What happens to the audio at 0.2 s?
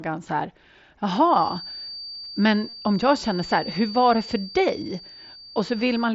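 Nothing goes wrong at 0.2 s: the speech passes through the Bluetooth mSBC headset link intact, with no dropout, click or distortion at that point.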